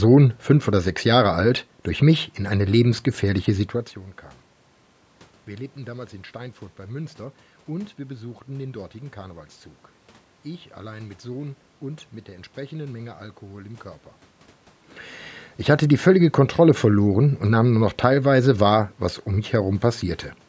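Nothing stood out on listening to this speech recording; the background noise of the room and the changes in level a few seconds in and again around 14 s, where the talker moves relative to the microphone, belong to the recording itself.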